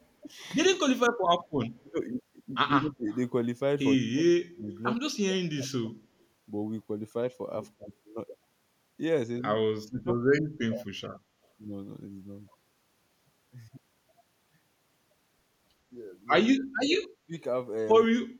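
From 0.74 to 3.09 s the speech keeps sinking in pieces, about 25 dB at the deepest, adding up to under a second of loss. That's speech suppressed in double talk, most likely because the echo canceller couldn't tell this talker from the far side talking at the same moment and pulled both down. It comes back harder from 4.0 to 5.96 s (about 35 dB, roughly a second and a half gone), briefly at 7.77 to 7.87 s, then 9.84 to 11.23 s and 16.53 to 18.38 s, each diving about 40 dB for around a second in total.

Threaded through that are three tiny echo leaks at 1.66 to 1.7 s, 3.12 to 3.18 s and 4.72 to 4.76 s. Each is a faint delayed copy of the voice trailing by 122 ms, sitting about 30 dB under the speech for the first two and about 25 dB under for the third. The likely cause is a loudspeaker on one end whose echo canceller let some of its own mic pickup slip back down the line.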